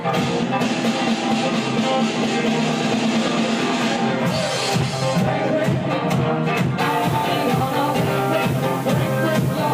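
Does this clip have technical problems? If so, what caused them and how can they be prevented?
Yes. Low bit depth with dither sets in at 6.79 s and lasts to the end at 9.74 s. From that point the sound is represented with only about 5 bits, and random dither is added before each sample is rounded to those few levels. The dither turns what would be harsh, signal-following quantisation distortion into a steady, even hiss, here sitting roughly 20 dB below the signal, clean in character but clearly audible. To prevent it, keep the processing and export chain at 16 or 24 bits and reduce word length only once, at the final stage.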